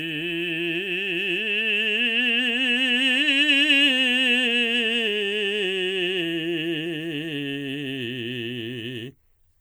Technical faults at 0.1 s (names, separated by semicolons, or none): generation loss